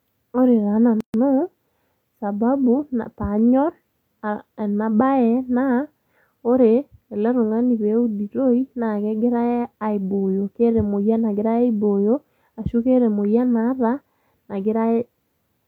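At 1.01 s the speech drops into a gap at a join of encoded pieces, about 135 ms of silence from padded encoder edges. It resumes at 1.14 s.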